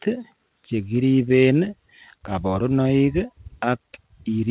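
Throughout the speech, clock drift between sender and receiver shows up: the sender's clock runs roughly 3 percent slow, so the receiver's buffer keeps draining. Unlike a single dropout, the hiccups recur unevenly across the whole clip. From 0.09 to 4.31 s, repeated timing corrections fill the gap, with the receiver repeating small pieces so that playback runs at 97 percent and stretches by about a tenth of a second. Every edit goes the same direction. Over the G.711 mu-law path, nothing is heard above 4 kHz.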